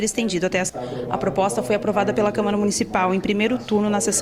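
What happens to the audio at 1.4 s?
A jitter buffer speed-up runs from 0.87 to 2.67 s: short pitch-period slices, about 70 ms in total, are cut to drain excess delay, so the sound runs 4% faster at unchanged pitch.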